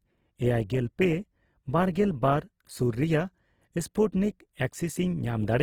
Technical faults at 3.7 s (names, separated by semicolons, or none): Opus compression